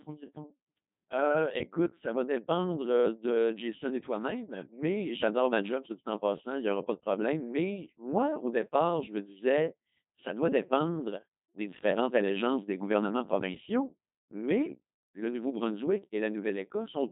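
From start to finish, the speech passes through a Codec 2 vocoder. Only pitch, voicing, energy and a spectral envelope survive. The decoder rebuilds the voice from sine waves. It sounds robotic and buzzy. The damage is heavy, with nothing above 3.8 kHz. This fits about 2.4 kbit/s.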